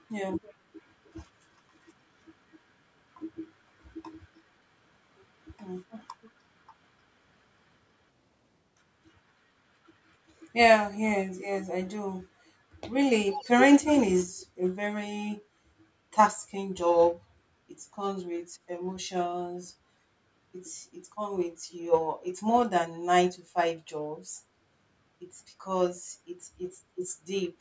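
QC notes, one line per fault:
0.42–0.54, 1.04–1.13, 5.96–6.31, 13.29–13.64 and 14.38–14.46 s, echo leak: short scraps of the talker come back 303 ms late. Most are faint, well down under the speech, but the 13.29 one is nearly as loud. Likely a speakerphone echo canceller letting some pickup slip through.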